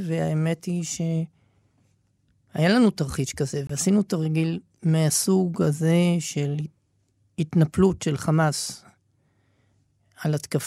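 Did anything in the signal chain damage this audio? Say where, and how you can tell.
Yes, at the codec stage: a corrupt frame muted from 3.67 to 3.70 s. The decoder rejected a damaged frame and the player filled about 32 ms with abrupt digital silence. Timing stays intact, which rules out a buffer dropout, and nothing is smeared over, which rules out concealment.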